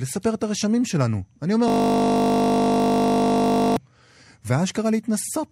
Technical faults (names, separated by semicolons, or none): system hang loop